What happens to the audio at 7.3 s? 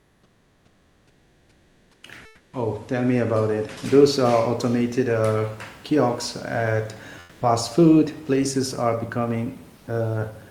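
Between 7.21 and 7.39 s, after "kiosks at" and before "food places are", the room's textured background gives way for 180 ms to a flat, featureless hiss about 3 dB quieter. This is comfort noise in place of the background. The sender likely paused transmission when its voice detector heard no speech, and the receiver filled the gap with synthetic noise shaped roughly like the real room noise, which sits about 34 dB below the speech.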